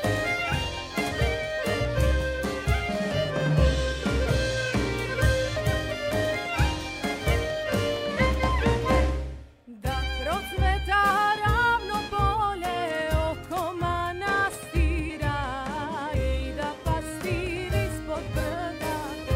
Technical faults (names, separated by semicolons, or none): compressed frames skipped